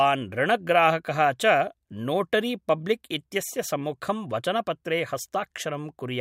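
No faults turn up anywhere in this speech clip, so there's nothing here to flag.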